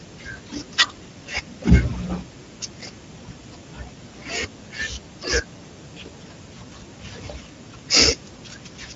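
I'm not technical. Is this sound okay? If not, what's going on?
No. Speex codec damage runs through the whole clip. This older internet-call format squeezes speech into very little data, so the voice comes out plainly hoarse. Everything above 7.7 kHz is simply missing.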